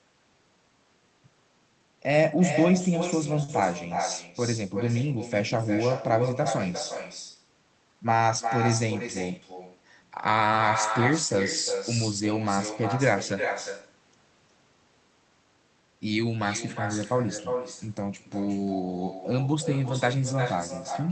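From the start and through the whole recording, the speech carries echo with no canceller. Each phrase is shadowed by a quieter, thinner copy arriving around 400 ms later and sitting about 6 dB below the direct speech. The far end is evidently playing the call over a loudspeaker, its microphone picks that playback up, and nothing on that side subtracts it before it travels back through the network.

At 3.43 s to 3.51 s there is a short stall from a late packet. A packet did not arrive in time, the jitter buffer ran dry, and the receiver held the last sound for 50 ms until the packet turned up, then carried on from the same point. No speech is lost, but that moment is audibly drawn out with a faint buzz or dip, and the playout delay grows by 50 ms.

From 9.07 s to 9.53 s comes a jitter buffer speed-up. The buffer was holding more audio than its target, so the receiver repeatedly cut out short pitch-period-sized slices, about 50 ms in total, to bring the delay back down. 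Over that stretch the speech runs at 109% speed with its pitch unchanged, giving a brief hurried feel. The audio passes through the Opus call path, and its 8 kHz bandwidth caps the high end. The coding texture fits a rate around 24 kbps.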